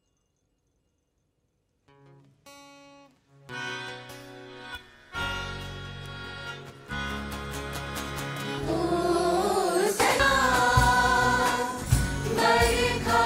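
At 10.2 s there is a brief burst of damaged data in a compressed stream: a corrupted stretch of the encoded file leaves the decoder unable to read the frames there, so it loses sync and hunts for the next valid frame header before carrying on. It sounds like a chirp, squawk, click or short hole.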